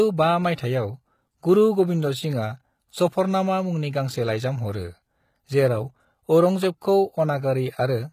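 Throughout the speech, the treble sounds rebuilt rather than carried, which points to the likely cause: HE-AAC compression at a very low rate, something like 20 kbps. The codec spends its bits on the lower spectrum and fills the top by copying lower bands upward under a coarse envelope. The highs stay bright, but their harmonics do not line up with the band below, so s sounds come across gritty, metallic and lispy, and the damage is plainly audible.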